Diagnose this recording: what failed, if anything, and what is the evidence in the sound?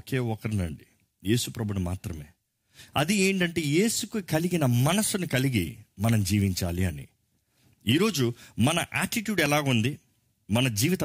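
A loud pop occurs twice in this speech, at 5.33 s and 9.46 s. Each is a single sharp thump of about 20 ms. The first peaks a few decibels above the speech and the second about 10 dB above it. The stage is likely the analogue wiring: a momentary voltage step from a connector, switch or static discharge, added to the signal and smoothed by the circuitry after it. The speech carries on unbroken beneath each pop, which rules out a buffer dropout or a packet-loss gap.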